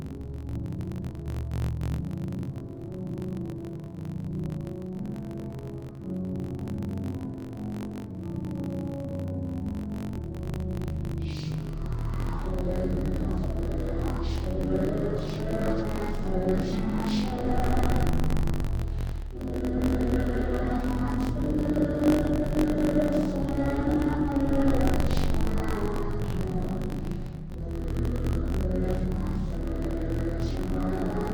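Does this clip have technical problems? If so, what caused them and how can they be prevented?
Yes. Throughout the whole clip, interleaved audio is being read as planar. Each 21.33 ms block, which fits 1024-sample blocks, holds alternating left and right samples, but the reader treats the first half as left and the second as right. Each half gets stretched across the full block, so the sound drops an octave, comes out doubled, and sounds choppy at the 46.9 Hz block rate. To prevent it, make sure the reader's channel layout flag matches what the writer actually produced.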